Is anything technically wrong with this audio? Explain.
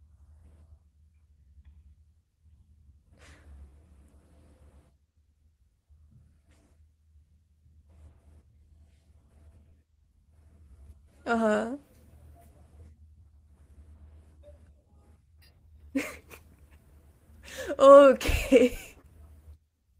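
Yes. There is short concealed packet loss at 3.69–3.73, 9.69–9.73, 15.85–15.91 and 19.01–19.05 s: about 20 ms of audio each time, and 40 ms at 15.85, never arrived, so the decoder extended the preceding speech and blended back, leaving brief smears or wobbles. The call-codec path's upper limit near 12 kHz is normal for this path, not a fault.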